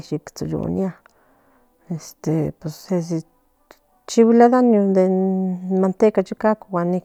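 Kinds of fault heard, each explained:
There are no kinds of fault heard in this speech.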